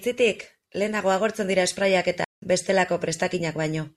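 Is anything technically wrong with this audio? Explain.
Yes. Just after "lehenago agortzen dira sprayak", from 2.24 to 2.42 s, the speech stops dead for about 0.18 s and then carries on: a playback stall. The player likely ran short of data or had its output thread held up, so nothing reached the output until it caught up. What marks it as a stall rather than a brief dropout or packet-loss glitch is its length and the clean, complete silence in mid-flow.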